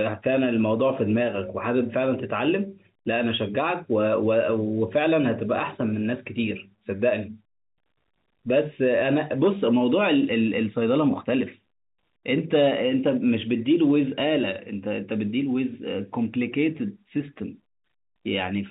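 No faults detected in the speech, which arrives over a G.711 A-law telephone path at 64 kbps that is working as intended, with the usual band limit at 4 kHz.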